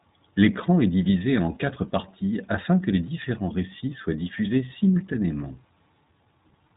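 From start to finish the speech passes through the iLBC codec. It is a narrowband VoIP codec. It codes each 20 ms frame on its own, without drawing on the frame before. Nothing above 3.8 kHz survives, so the sound is muffled and boxy. The codec damage is plainly audible. Voiced sounds turn rough and slightly synthetic. That coarseness fits iLBC's 15.2 kbps mode.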